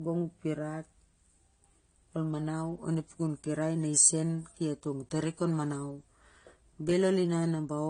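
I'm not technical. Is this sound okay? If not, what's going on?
No. Low-bitrate audio saved at a high bitrate, throughout: the speech is dull, with nothing above 9.6 kHz, likely because a heavily squeezed copy was re-saved, which cannot restore the lost detail.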